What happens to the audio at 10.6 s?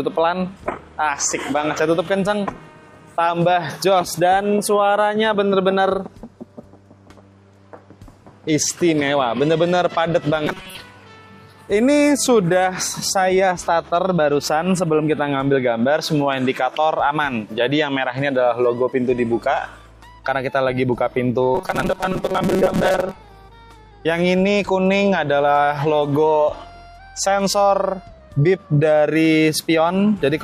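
At 10.6 s the sound falls into a robotic buzz from repeated short buffers. It runs from about 10.47 to 10.77 s. Over that span the audio turns hard and metallic, with a steady buzz at 188 Hz. The likely cause is a stream running dry, so the same tiny slice of audio replays instead of fresh material. A 188 Hz buzz fits slices about 5.3 ms long. Most of this stretch is repeats rather than new sound.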